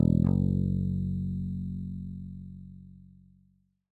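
No technical faults can be heard anywhere in this audio; the signal holds steady throughout without any disturbance to its level, timing or continuity.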